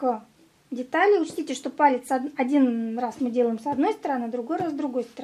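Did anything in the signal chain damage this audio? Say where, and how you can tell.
No, nothing in the chain audibly damaged this audio.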